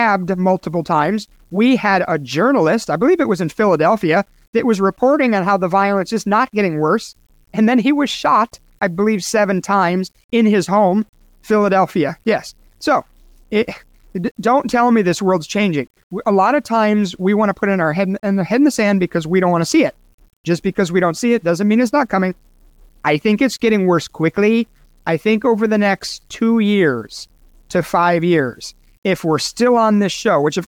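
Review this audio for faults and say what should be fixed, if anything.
The speech was likely reduced to low bit depth without dither, rounded to a coarse grid that fits roughly 9 bits, across the whole clip. Because the rounding error tracks the waveform instead of being randomised, it becomes a grainy distortion that shifts with each syllable, sitting around 45 dB below the speech. Quiet tails and pauses turn gritty, and the softest passages sputter between steps or drop out. To prevent it, keep at least 16 bits and apply dither whenever reducing word length.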